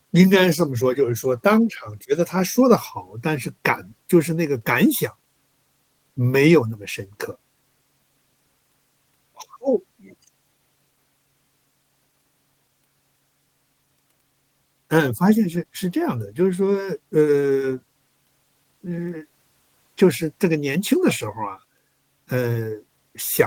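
No technical faults are audible anywhere in this speech.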